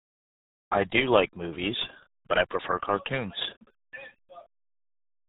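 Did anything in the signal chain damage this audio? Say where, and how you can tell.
Yes. The damage is at the codec stage: the speech was squeezed through the RealAudio 14.4 codec for its whole length, and the heavy artefacting fits a bitrate of around 8 kbit/s. Nothing survives above about 3.8 kHz, so the speech sounds boxed-in and muffled. The coder rebuilds each short frame from a coarse model of the vocal tract instead of the waveform itself, which gives the speech its gargly, bubbling texture.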